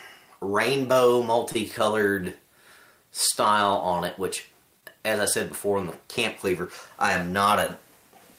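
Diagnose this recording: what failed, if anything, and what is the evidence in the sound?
The network path failed twice, each time as a short stall from a late packet. At 1.52 to 1.57 s the sound hangs for about 25 ms. At 4.81 to 4.85 s it hangs again, for about 19 ms. Nothing drops out. The jitter buffer ran dry, so the receiver stretched the last sound until the delayed packet arrived. Playback then resumed from the same point, and overall delay grew by the held amount each time.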